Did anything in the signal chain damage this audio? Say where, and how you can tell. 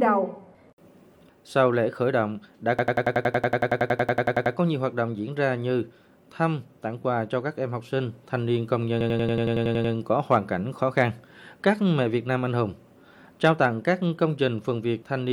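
Yes: a system hang loop at the driver buffer. From 2.79 to 4.55 s and 9.01 to 9.94 s, one 93 ms slice stutters at 10.8 Hz as the hardware replays a stalled ring buffer, which fits 4096 samples.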